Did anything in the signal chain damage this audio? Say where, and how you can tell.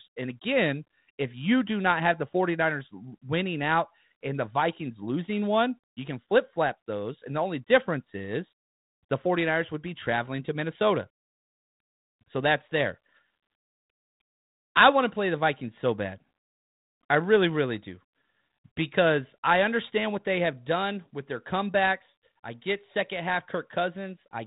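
No, nothing in this speech stood out on listening as damage from any stage of the chain, the 32 kbit/s G.726 telephone coding included.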